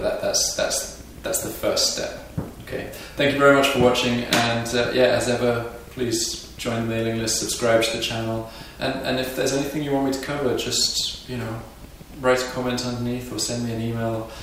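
No technical faults can be heard anywhere in this audio.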